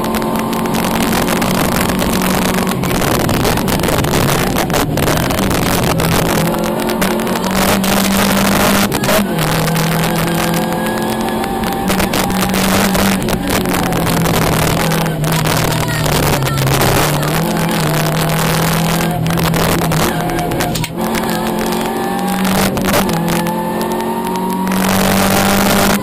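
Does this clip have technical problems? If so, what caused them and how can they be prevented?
Yes. Integer overflow runs through the whole clip: the loudest peaks break into sharp cracks, distinct from the rounded flattening of ordinary clipping. The signal was driven about 3 dB past the largest value the integer format can hold, and a few percent of samples exceeded that limit. Instead of being held at the ceiling, each of those samples wrapped around to the opposite sign, jumping across the full range. To prevent it, use saturating arithmetic or a limiter before converting to integers, or leave enough headroom that sums and gains never exceed the format's range.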